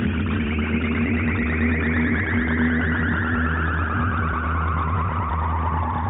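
The music signal carries no audible technical faults at any point in the clip.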